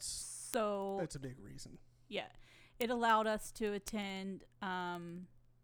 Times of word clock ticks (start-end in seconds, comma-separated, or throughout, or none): 0.11-5.59